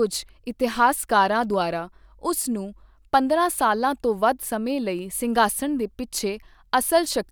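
No technical faults can be heard anywhere in the speech recording.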